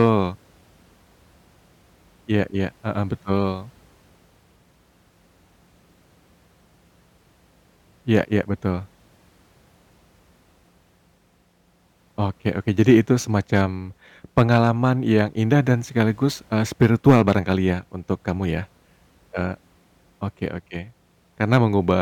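Hard clipping hits loud peaks at 0.0–0.1 s, 12.80–12.99 s, 14.38–14.69 s, 16.83–17.52 s (after "indah dan sekaligus eee", before "ya untuk kamu ya") and 21.53–21.91 s. The signal overdrives by about 2 to 5 dB, so peaks are cut flat. The result is a harsh, crackly fuzz.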